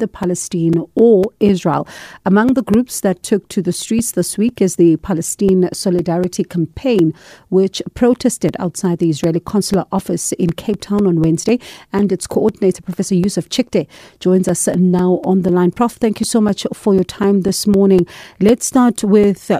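Speech with periodic USB or driver dropouts from 0.23 s to 19.49 s. Every 0.25 s, roughly 4 ms of audio drops to silence. A background task stalling the driver fits this timing. The result is a steady ticking heard only under the speech.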